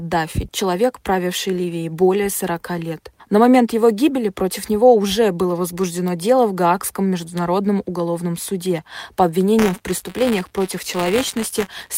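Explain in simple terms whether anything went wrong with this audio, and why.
From 9.58 s to the end, the sound picks up a steady robotic buzz, a fast rattle at about 188 Hz that rides on top of the audio wherever there is signal. This is buffer tearing: the software filling the audio buffer and the hardware playing it have fallen out of step, so in every chunk a small slice of sound from about a fiftieth of a second earlier gets played, with abrupt joins. The buzz rate fits a 256-sample buffer.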